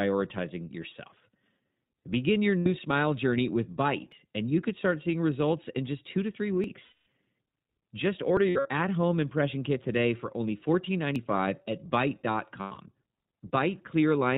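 Recorded speech runs through the iLBC codec for its whole length, and the coding damage is plainly audible. Everything above 4 kHz is gone, so a spectrogram shows a hard flat ceiling at that line, and the voice has the slightly rough, synthetic grain of a narrowband coder that builds each short frame's excitation on its own. That grain fits the 15.2 kbps mode with 20 ms frames. Lost iLBC frames appear four times. At 2.59 to 2.68 s, 80 ms is concealed. Just after "just two to three", a longer 220 ms stretch from 6.84 to 7.06 s is concealed. From 8.50 to 8.67 s, right before "at home impression kit", 120 ms of losses are scattered over 160 ms, with the longest run around 70 ms. From 12.61 to 12.78 s the same 120 ms is scattered over 160 ms, with the longest run near 100 ms. In each gap the decoder repeats the last pitch cycle mixed with noise, so it sounds like a held, buzzy vowel. On a spectrogram that shows as evenly spaced harmonic stripes that smear and fade, most visibly across the 220 ms gap, and the speech recovers almost at once afterwards. 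Short skips occur at 4.12, 6.64, 8.37 and 11.16 s, with about a hundredth of a second missing at the first and third and roughly twice that at the others. They are likely a dropped buffer (overrun). The waveform shows a sudden step where two separate moments are butted together with no silence between them.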